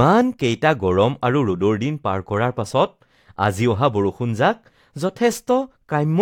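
No technical faults are audible anywhere in the recording.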